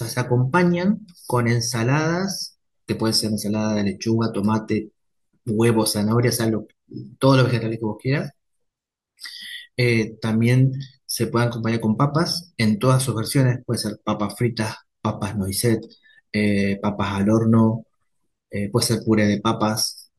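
No technical faults are audible.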